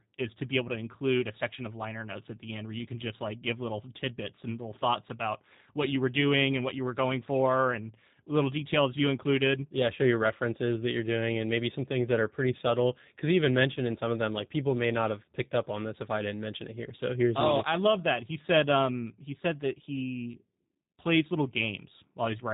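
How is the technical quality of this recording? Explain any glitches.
The recording carries audible codec damage from start to finish. Throughout, there's G.729 codec coding: the speech is rebuilt from a vocal tract model and a few pulses per short frame, so it sounds rough and slightly synthetic, with nothing above 3.8 kHz. That fits a narrowband 8 kbit/s VoIP link.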